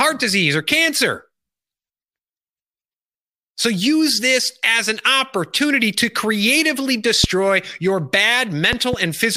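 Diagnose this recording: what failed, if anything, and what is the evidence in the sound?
Loud pops, likely voltage steps in the analogue wiring. One hits at 7.24–7.26 s, after "an opportunity to creatively". A double pop follows at 8.73–8.96 s.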